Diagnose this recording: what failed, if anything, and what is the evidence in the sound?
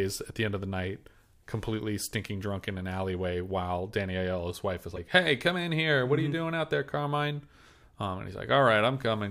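At 4.95 to 4.98 s the speech skips ahead through a 30 ms garbled stretch: a break on a spectrogram, a step in the waveform. The codec stage is at fault, likely a broken MP3 bit reservoir, where the frame after a cut decodes another frame's bytes.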